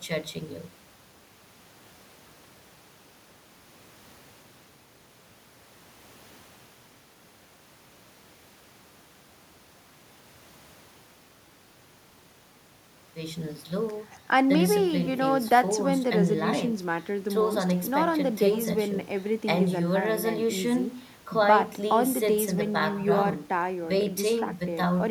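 No technical faults can be heard anywhere in the speech.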